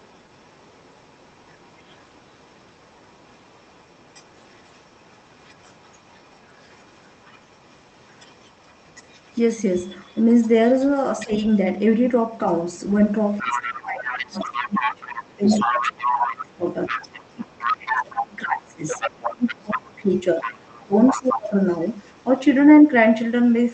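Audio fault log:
0.0–11.57 s and 12.47–12.77 s, other side's voice leaking through: the echo canceller likely left a residue of the far-end loudspeaker signal in the microphone path. A faint second voice sits under the talker, about 35 to 40 dB down, barely audible.
13.32–22.24 s, other side's voice leaking through: here the canceller likely failed far more, and the far-end voice comes through only about 5 dB below the talker. It is a clearly competing second voice, heard through the 8 kHz-wide Opus call path.
11.24–11.31 s, speech suppressed in double talk: with both sides active, the echo suppressor likely could not separate the talker from the echo and attenuated both. The result is a brief 70 ms dip of roughly 20 dB in the talker's level.
13.39–16.67 s and 17.34–21.55 s, speech suppressed in double talk: during long overlaps with the far end, the suppressor likely kept clamping the microphone signal. 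The talker's voice sinks by about 20 to 25 dB in patches totalling several seconds, sounding ducked.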